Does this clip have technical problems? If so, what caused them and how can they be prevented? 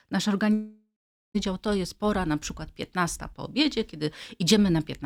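Yes, there's a long network dropout running from about 0.53 to 1.36 s. The sound stops being real audio and turns into a smeared continuation of its last moment that fades out, leaving roughly 0.44 s of near silence before things pick up again. About 0.82 s of the original is simply gone, most likely because packets stopped arriving and the receiver concealed the gap. A steadier connection with a larger jitter buffer and redundancy such as FEC would help prevent it.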